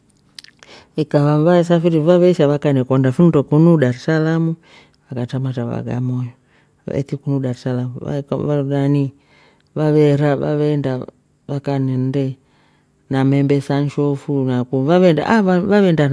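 Nothing stood out on listening to this speech recording; no technical fault could be heard at any point.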